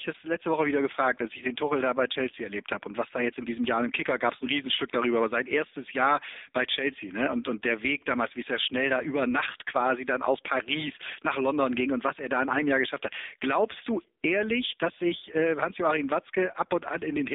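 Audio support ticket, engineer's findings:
AMR narrowband mobile codec across the whole clip: speech band-limited to roughly 300 Hz–3.7 kHz, buzzy and synthetic. Heavy coding damage suggests a low mode, around 6.7 kbps.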